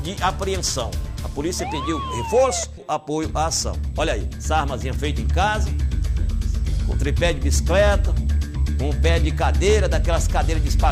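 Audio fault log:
2.77–2.79 s, skip ahead: Playback jumps forward with no gap and nothing filled in. About a second of audio is simply missing. The jitter buffer likely dropped that stretch while later audio waited, so the two sides butt together almost directly.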